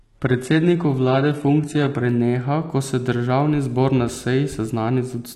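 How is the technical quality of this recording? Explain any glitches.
The opening of the speech has reduced quality before it improves. From 0 to 2.0 s, the treble sounds dull and partly synthetic, with nothing above 11.8 kHz and stronger codec smearing. Then the sound sharpens abruptly, with no gap. This is an adaptive stream starting at a low bitrate: the player began on a cheap version, fitting HE-AAC around 16 kbit/s, then stepped up to roughly 96 kbit/s AAC-LC after measuring the connection.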